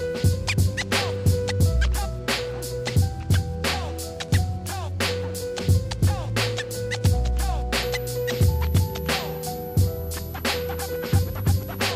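A switching power supply in the chain runs in an audible burst mode or beats with another one from 7.82 s to 11.92 s, and its switching frequency leaks into the audio as a switching supply whistle. It is a thin, high whistle wandering between about 11.8 kHz and 12.2 kHz as the supply's load shifts. It sits roughly 20 dB below the main signal and continues to the last moments of the clip.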